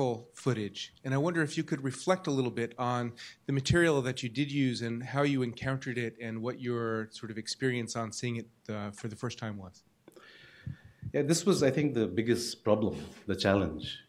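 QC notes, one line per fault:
0.15–14.05 s, clock slip clicks: two unsynchronised devices, likely about 400 ppm apart, drop or repeat one sample roughly every 70 ms. Each slip is a tiny waveform jump, and at this rate they merge into a faint, steady rattle under louder sustained sound.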